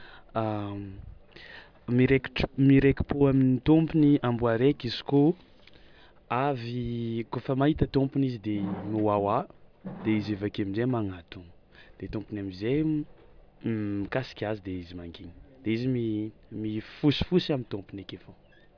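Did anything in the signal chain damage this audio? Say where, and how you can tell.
No, nothing in the chain from capture to playback audibly damaged this speech recording.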